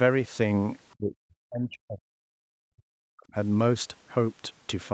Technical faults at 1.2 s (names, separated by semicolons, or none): speech suppressed in double talk